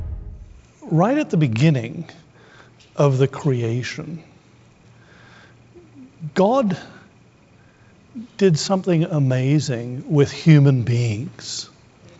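No faults can be heard: the audio comes over a WebRTC call path that is working normally, and its content stops at 8 kHz, which fits a wideband call codec such as G.722 running at 64 kbps.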